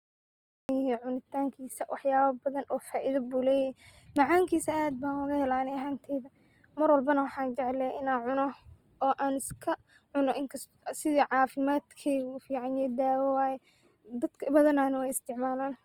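A cut-off start comes first: the speech begins abruptly at 0.69 s out of digital silence, already partway through a sound. The recording or stream evidently started late, so there is no natural onset or fade-in, just a hard entry into the middle of the signal.

Channel delay (comb filtering) runs through the whole clip. One channel trails the other by only a few samples, well under a tenth of a millisecond, and summing them to mono cancels shared content at regularly spaced frequencies, starting around 7 kHz. The upper range sounds thin and hollow.

Opus compression damage is plainly audible across the entire clip. The speech has a grainy, rough, noise-filled texture instead of swirling artefacts, with the full bandwidth kept. This is likely Opus in its music (CELT) mode, and the coarseness fits a low bitrate of about 24 kbps, where bands run short of bits and get filled with folded or noisy content.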